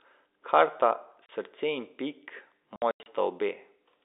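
Packet loss filled with silence at 1.26 s, a 30 ms hole, then 2.76 to 3.06 s, where 180 ms of dropouts are scattered, longest 90 ms. Missing packets, fitting 30 ms packets, became dead air with hard edges through the narrow G.711 telephone band.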